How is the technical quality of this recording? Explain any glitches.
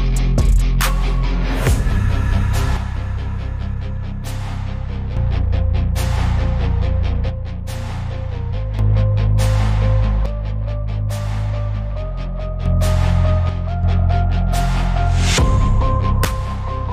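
The quality is marred by five level dips. The level suddenly falls by about 6 dB at 2.77–5.17 s, 7.30–8.79 s, 10.26–12.66 s, 13.49–13.83 s and 16.25 s to the end; the first four then snap back. That's likely one channel dropping out: the mono sum loses half the shared signal, and anything unique to that side vanishes.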